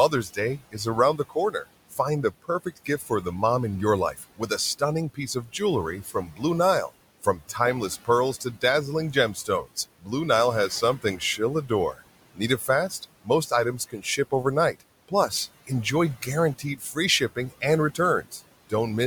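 Throughout the clip the background sinks away in the gaps and swells back up beneath the speech. These are noise suppressor artifacts. The suppressor pulls down, frame by frame, every band it judges to be steady noise, here by about 18 dB. The room noise it is working on sits about 19 dB below the speech.

The same processing also takes parts of the speech for noise, and speech cut by the noise suppressor turns up in four stretches. From 0.11 to 3.26 s, ending just before "mom in your", soft sounds are swallowed by up to about 18 dB, adding up to roughly half a second. From 4.14 to 10.09 s, just after "mom in your", about a second in total is dulled by up to about 17 dB. From 10.69 to 15.7 s the drops reach about 16 dB over roughly 0.7 s. From 16.59 to 18.72 s they reach about 13 dB over a few tenths of a second. In each stretch, quiet parts of the speech were judged to be background and turned down with it.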